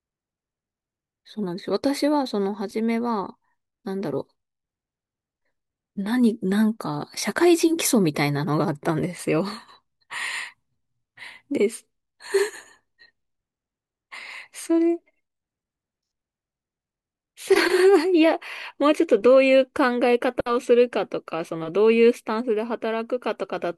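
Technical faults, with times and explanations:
No technical faults can be heard anywhere in the speech recording; the signal holds steady and continuous throughout.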